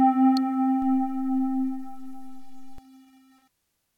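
At 0.37 s there's an electrical switching spike, a sharp little snap riding on top of the sound and gone in a few milliseconds. It's most likely a nearby switch, motor or static discharge arcing briefly, with the audio line picking up the burst.

Then at 0.82 s a DC step kicks in: the waveform's zero line jumps by about -35 dBFS and holds there until 2.78 s, when it drops back. You hear a low thump at each edge, while the sound underneath carries on unchanged.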